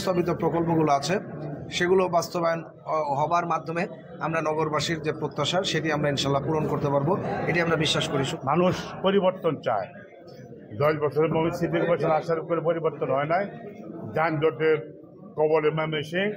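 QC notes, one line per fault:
3.28–4.40 s and 7.23–8.61 s, drift correction step: playback jumps about 6.4% faster in one step, so speed and pitch rise together by roughly 108 cents, a little over a semitone, then snap back. It is likely a clock-matching stage draining its buffer.
10.72–11.45 s and 14.29–15.71 s, drift correction step: the opposite move, 6.4% slower and about 115 cents flat, likely refilling the buffer before returning abruptly to normal rate.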